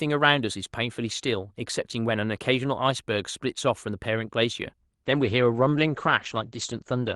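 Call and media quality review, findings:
Call bitrate drop, 5.07 s to end of clip: bandwidth estimate fell, encoder forced to far fewer bits, consistent with roughly 64 kbps down to about 14 kbps. Coarser coding, top end cut from 20 kHz to 8 kHz. Speech turns muffled and rough, no recovery.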